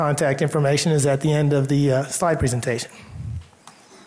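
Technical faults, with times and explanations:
No technical faults are audible anywhere in this audio.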